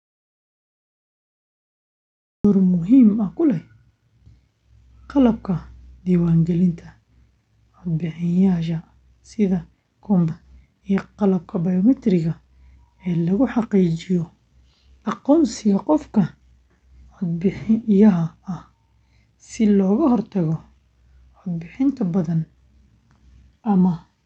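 The recording opens in an audio dropout to silence already under way, running to 2.45 s. The signal is silent with no room tone, then speech enters mid-flow. The likely cause is lost input, such as a disconnected device or a mute, while the recorder kept writing.

At 10.29 s there is a skip ahead. Roughly 0.7 s of speech is simply absent, and the two sides are butted together with no gap or fill. This points to the jitter buffer discarding a backlog to cut its delay.

From 10.42 s to 14.24 s a jitter buffer speed-up follows. The receiver repeatedly removed short pitch-period slices, about 0.3 s in total, so the speech runs at about 107% speed. It sounds hurried while the pitch stays unchanged. The call path's Opus coding is audible in the top end cutting off at about 8 kHz.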